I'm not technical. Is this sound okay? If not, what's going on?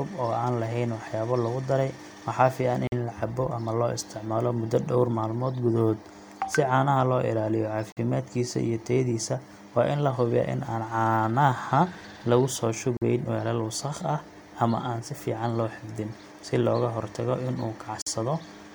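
No. There is a gap between chunks at 2.87–2.92 s (just before "in la"), 7.92–7.97 s, 12.97–13.02 s (after "lagu soo") and 18.02–18.07 s (after "looga hortago in uu"). The speech arrives in 5-second pieces, and every join leaves a sharp 48 ms silent hole.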